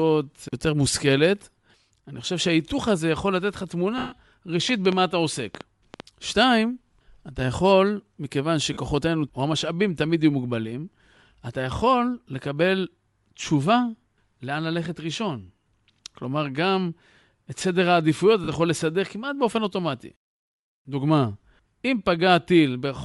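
A breathy, grainy edge sits on the speech throughout, with the upper spectrum thinned and noise-filled, likely from Bluetooth LC3 compression at a low bitrate, around 48 kbps with 10 ms frames. From 3.98 to 4.13 s the sound smears into noise and fades for 140 ms. These are lost LE Audio frames: the decoder repeated the last spectrum with scrambled signs and let it die away. From 4.69 to 6.01 s a train of clicks ticks over the audio, roughly seven pops at an uneven pace of about 4.6 per second, standing well above the speech. They point to interference or a struggling interface. Shorter noisy smears of 40 ms each, again from lost LE Audio frames, come at 8.73 to 8.77 s and at 18.44 to 18.48 s.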